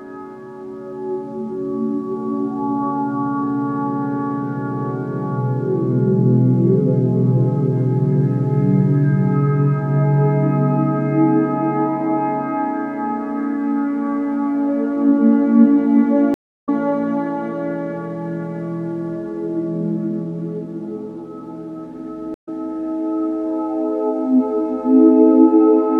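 Two stream reconnect dropouts: at 16.34 s the audio goes silent for 306 ms and comes back about a third of a second further on, and at 22.34 s a 102 ms gap resumes slightly ahead. Each time the connection broke and a fresh decoder picked up the live stream mid-flow.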